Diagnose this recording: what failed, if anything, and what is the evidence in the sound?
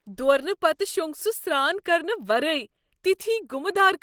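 Codec stage, throughout: likely Opus compression in hybrid mode, heard as hoarse, grainy speech without MP3-style swirl, while content still reaches about 20.2 kHz.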